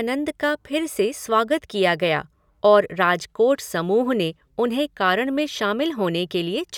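Listening to this speech recording, nothing technical stood out as a problem at any point.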